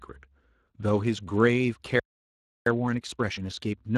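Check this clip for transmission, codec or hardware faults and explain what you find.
Three faults are audible: Speex codec damage throughout, a playback stall, and time-compressed catch-up after it.

The Speex codec damage runs from start to end. Speex is a CELP speech coder. It models each short frame with a filter and a coded excitation. The excitation gets only a limited bit budget. Here the damage is plainly audible. The speech sounds rough and grainy, with a noisy edge on it. The sound fits a bitrate of around 22 kbps. Nothing is present above 15.4 kHz.

The playback stall starts at 2.00 s and ends at 2.66 s. The speech stops in mid-flow and the output goes silent for 0.67 s. The likely cause is a player that ran dry of data or had its thread blocked. Output resumes only once the player recovers. The gap is long enough to break the flow clearly.

The time-compressed catch-up runs from 2.66 s to the end. 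The player is working off the backlog that built up during the silence. It drops small slices and cross-fades the joins. The speech plays at 1.25 times normal speed, but the pitch stays the same. The result sounds hurried.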